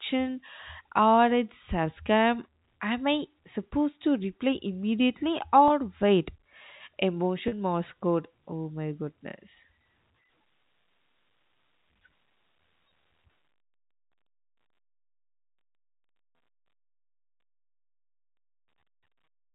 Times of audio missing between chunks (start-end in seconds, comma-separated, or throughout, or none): none